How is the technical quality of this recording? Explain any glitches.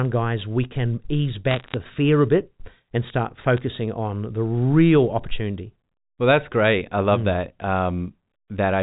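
The recording has two bursts of bit errors on a digital phone line. The first runs from 1.51 to 1.74 s, between "guys we can ease" and "fear a bit and". The second is brief, 3.57 to 3.61 s, after "a bit and start". Flipped bits corrupt single samples in the 8 kHz telephone stream, which fits 64 kbps A-law coding. Hits on sign or high bits become sharp ticks. The first burst crackles, at an error rate near half a percent. The second is sparser.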